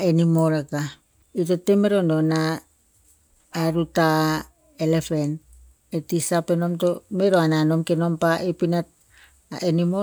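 Nothing to flag: the speech carries on from beginning to end without any technical fault cropping up.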